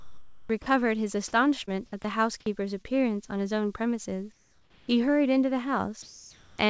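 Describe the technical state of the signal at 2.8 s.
Short concealed packet loss spans 2.82 to 2.86 s. 20 ms never arrived. The receiver continued the previous sound to fill it, heard as a brief smear.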